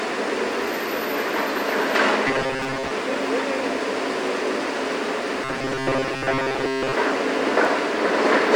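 Robotic sound from repeated short buffers appears at 2.28–2.91 s and again at 5.44–6.94 s, where the sound collapses into a rigid metallic buzz at 133 Hz. This is likely a segment of about 7.5 ms looped to cover late audio, with most of the real material skipped.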